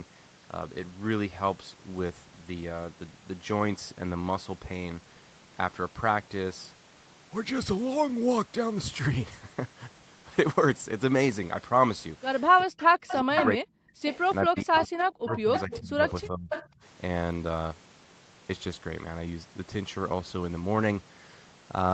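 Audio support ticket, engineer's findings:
Speech dips sharply, up to roughly 40 dB down, in pieces during 12.61–13.94 s (about a second affected) and 14.47–16.5 s (about a second and a half). Speech suppressed in double talk, likely: the echo canceller couldn't separate near talker from far-end echo and attenuated both.

Delayed copy of the voice audible at 12.78–13.46 s, 14.06–14.19 s, 14.56–16.11 s and 16.49–16.65 s, lagging 432–443 ms, roughly 5 to 15 dB below the direct speech. Echo leak, likely from a loudspeaker endpoint whose canceller left residual echo that was sent back.

Brief background dropout at 16.8 s, 40 ms, about 19 dB deep. Background gated by the echo canceller: the microphone was clamped hard while the loudspeaker played, and the room sound returned once the canceller released.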